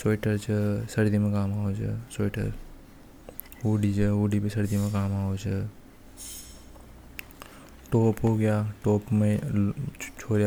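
A speech recording with no audible technical faults anywhere in the signal.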